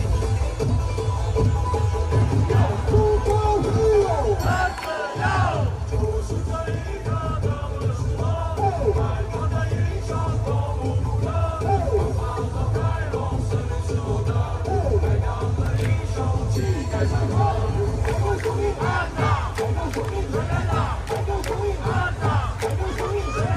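No technical faults can be heard anywhere in the audio.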